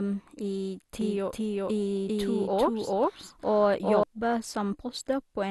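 From start to finish the speech sounds dull and gurgly, with nothing above 12.2 kHz. That's likely MP2 compression starving the upper sub-bands, consistent with a low bitrate around 64 kbps. From 1.01 to 4.03 s there's a doubled audio track, with a second copy about as loud trailing roughly 0.4 s behind. It's likely a slower capture path, and it cuts in and out abruptly.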